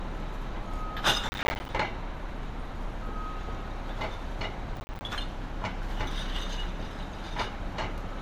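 Processor overload crackle at 1.29 to 1.69 s and 4.76 to 5.01 s. Repeated missed processing deadlines, consistent with roughly 10 ms buffers, leave short hard-edged silent gaps heard as gritty tearing.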